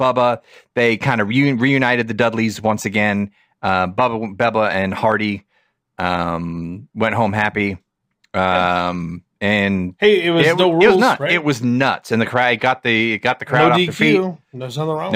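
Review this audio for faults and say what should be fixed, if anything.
Imaging from linear upsampling runs throughout: straight-line interpolation, which fits a 22 kHz source raised to 48 kHz, dulls the top and adds a faint metallic shimmer on sibilants. A spectrogram shows a mirrored copy of the speech from 11.03 kHz to 22.05 kHz, roughly 40 dB down. Resample with a proper band-limited (windowed-sinc or polyphase) filter instead of linear interpolation.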